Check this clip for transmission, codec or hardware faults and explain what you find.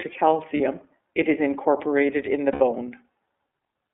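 Two faults are present in this speech clip: iLBC codec coding throughout, and lost iLBC frames at two points.

The iLBC codec runs for the whole clip. Its narrowband path limits sound to roughly 250 Hz to 3.5 kHz, and its frame-by-frame excitation coding leaves plainly audible damage, with speech a little rough and synthetic. The rate fits 13.33 kbps with 30 ms frames.

Lost iLBC frames occur from 0.57 to 0.60 s and from 2.52 to 2.62 s. The decoder repeats the last pitch cycle mixed with noise, so each 30 ms and 90 ms gap sounds like a held, buzzy vowel. This fits one lost frame and then three. The voice is right again almost at once because each frame stands alone.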